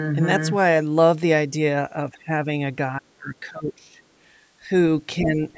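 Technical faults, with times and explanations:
2.08–2.47 s, 2.98–4.01 s, 5.21–5.58 s: speech suppressed in double talk. The speech dips by about 15, 30 and 10 dB, likely because an echo canceller confused overlapping talk with echo. The waveform shows level troughs, and the spectrogram shows faded energy.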